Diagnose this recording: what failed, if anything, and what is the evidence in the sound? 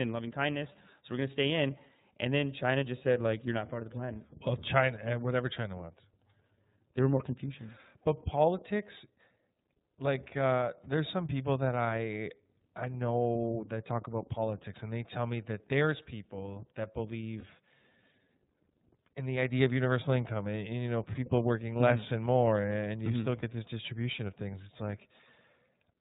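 The codec stage applies iLBC compression throughout, consistent with its 30 ms, 13.33 kbps mode. Nothing passes above 4 kHz, and the speech sounds slightly rough and synthetic.

Lost iLBC frames on the network path cause brief held, buzzy vowels at 17.4 s, after "that there's people that", and at 23.39 s, before "this distribution of things". Each gap is about 30 ms, and clean speech returns immediately.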